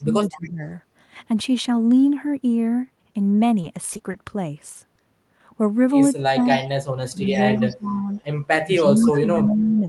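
From 0.00 to 0.62 s the speech dips and thins, falling by around 20 dB at its deepest for about half a second. This is speech suppressed in double talk, likely an echo canceller that could not separate the near talker from loudspeaker echo and turned both down. From 0.33 to 0.50 s a faint copy of the speech trails the original by 250 ms at about 20 dB below it. That is an echo leak, likely loudspeaker pickup the canceller failed to remove.

Between 3.61 and 4.15 s the sound turns choppy. This is repeated packet loss: four gaps, none longer than 20 ms, were each patched by extending the previous sound, so about 15 percent of that stretch is synthetic fill. At 4.73 to 4.77 s a brief smear marks a short concealed packet loss, where 20 ms of missing audio was filled from the preceding sound.

The suppression returns three more times. From 6.19 to 6.79 s the speech drops by about 35 dB at worst, with an echo leak from 6.44 to 6.63 s at about 25 dB down. 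From 7.11 to 8.09 s it drops by around 20 dB, with echo from 7.31 to 7.41 s at about 25 dB down. From 8.63 s to the end it drops by roughly 15 dB, with echo from 8.77 to 9.43 s at about 20 dB down. Every echo sits 250 ms behind the speech.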